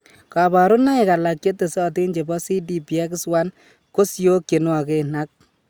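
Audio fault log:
No fault to log in this speech clip.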